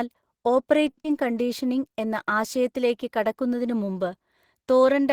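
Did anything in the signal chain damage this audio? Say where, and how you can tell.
Yes, and it's all on the network side, in the receiver's jitter buffer. Around 0.89 to 0.99 s there's a short stall from a late packet. The sound just hangs, held for roughly 80 ms with a slight buzz or dip, and then picks up exactly where it left off. Nothing's actually lost. The buffer ran dry waiting for a packet, stretched the last sound until it showed up, and ended up about 80 ms further behind.

Right after, at 1.03 to 1.06 s, you get a short concealed packet loss. It's a quick smear, where about 40 ms of real audio never arrived in time. Only around 10 ms of that was covered by continuing the previous sound, so the receiver effectively skipped ahead, trimming somewhere around 30 ms of delay.

Then from 1.23 to 1.47 s there's a jitter buffer slow-down. The speech drags to about 86% speed but keeps the same pitch, with sounds drawn out. 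That's the receiver repeating individual pitch periods to rebuild its cushion, adding about 42 ms in total. It's a deliberate time-stretch rather than a resample, and that's why the pitch holds steady.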